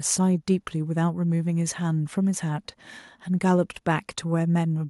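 At 3.50 to 3.52 s there is a brief microphone overload: a harsh crackle on a loud peak in the speech, about 1 dB over full scale. It is likely caused by input gain set too high, flattening the tops of a few percent of samples. The waveform shows squared-off peaks; the spectrogram shows a broadband smear.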